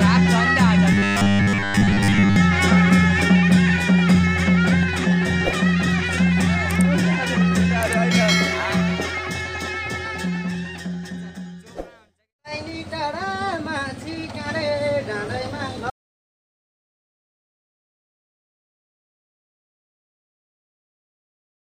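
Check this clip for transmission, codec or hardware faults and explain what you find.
Two faults stand out: a robotic stretch near the start and a dropout that runs to the end.

Robotic sound from repeated short buffers, 0.92 to 2.36 s. Fresh audio was likely arriving too slowly, so playback kept looping the most recent fragment, roughly 10 ms long, to fill the gaps. For most of that stretch the sound is these repeats rather than new material. Looping a 10 ms slice imposes a steady 100 Hz buzz, so the sound turns metallic and mechanical while loosely keeping its original contour.

Audio dropout to silence, 15.9 s to the end. The sound cuts off abruptly and never returns. The gap is silence, with no room tone or background underneath, the mark of a recorder writing silence after losing its input, likely through a disconnected device, a broken link or an accidental mute. Whatever happened after that point was never captured.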